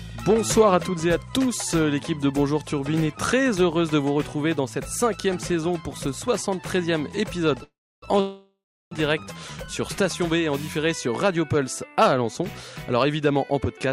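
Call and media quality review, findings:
Call audio freeze, 7.63–8.04 s and 8.20–8.93 s: sound stalls into a fading buzz, then silence for about 0.3 s each time, then resumes where it stopped. Likely jitter buffer underrun from held-up packets. Gaps of 0.39 s and 0.71 s inserted, nothing lost, delay grows accordingly.

Jitter buffer speed-up, 13.51–13.88 s: audio briefly hurried, pitch unchanged, running at 111% speed. Receiver trimming short pitch-period pieces, roughly 50 ms in total, to shrink excess buffered delay.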